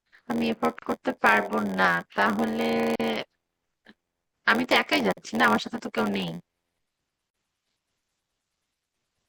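Right from the start there's a steady buzz at about 86 Hz, and the pace drags to roughly 0.94 of normal speed with the timbre unchanged. That's a block size mismatch (padded): each block comes up short and gets zero-filled, which fits a 512-sample read with around 480 written. The speech also has a plainly watery, swirly sheen with smeared consonant attacks, most likely from MP3 compression at a low bitrate near 64 kbps. Then at 0.79, 2.96, 5.13 and 7.30 s, roughly every two seconds, the speech drops out for about 33 to 38 ms and picks up right where it left off. Those are gaps at a join of encoded pieces: separately encoded chunks were butted together without trimming the encoder's start delay and end padding, so each join leaves a short silence with softened edges.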